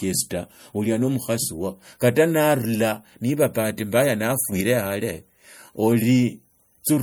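Throughout the speech, watery, swirly smearing and plainly audible codec damage point to MP3 compression, likely at a low bitrate around 64 kbps, with weak spectral detail flickering between frames. From 4.52 to 4.61 s, a sudden gain jump lifts the speech and background noise together by about 6 dB, likely from an unramped digital gain change.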